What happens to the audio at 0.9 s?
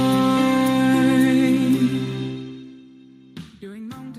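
Nothing goes wrong at 0.9 s; the audio plays through intact there, with any level movement at that point being a smooth, fader-like change rather than a fault.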